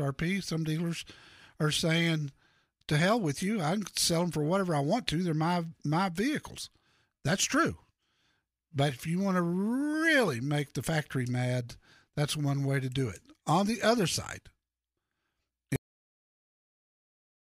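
At 15.76 s the final stretch of buffered audio was never written out, a cut-off end. The speech stops abruptly mid-sound, with no natural decay, and drops straight into digital silence that lasts until the clip ends.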